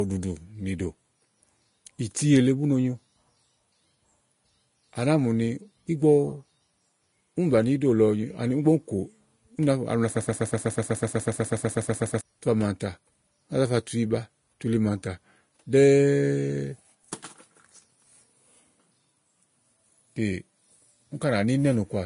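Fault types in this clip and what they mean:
Vorbis compression: The whole clip carries plainly audible coding damage, likely from Vorbis at a low setting, which fits a bitrate near 33 kbps. Nothing is present above 10.6 kHz. The codec keeps a smooth outline of the spectrum and codes the detail on top only coarsely. In the treble, that detail turns into noise of similar energy. The speech therefore sounds hissy and grainy, with roughened tones and blurred onsets.
broken-record loop: From 10.17 to 12.21 s, one fragment of 123.5 ms repeats back to back 17 times. It sounds like a stuck record, a rapid stutter of identical pieces. The likely cause is a player, encoder or stream that stalled and kept resending the last fragment it held. Whatever speech belonged in those two seconds is lost. Playback picks up again only once the repeats end.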